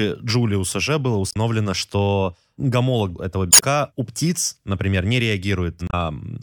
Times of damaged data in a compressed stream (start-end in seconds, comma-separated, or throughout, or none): 1.29-1.36, 3.49-3.63, 5.86-5.93